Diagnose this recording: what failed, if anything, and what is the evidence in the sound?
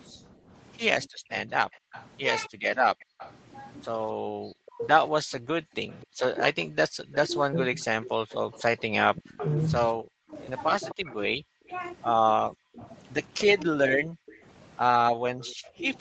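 From 0.09 s to the end at 16 s, the speech keeps dipping, thinning and breaking into fragments, at worst falling by roughly 40 dB, as though something were ducking it rather than the talker pausing. That is speech suppressed in double talk, a call-processing fault: with both sides active, the echo canceller likely could not tell the near talker from loudspeaker echo and pulled the whole signal down, taking the wanted speech with it.

A faint delayed copy of the speech trails the original by about 257 ms in three stretches: 1.29 to 3.34 s, 5.91 to 9.49 s (the most audible, around 15 dB below the speech), and 11.09 s to the end (quietest, well down in the background). This is echo leak, again in call processing. The far end was likely playing the call over a loudspeaker, and its echo canceller left part of what its microphone picked up, which was sent straight back down the call.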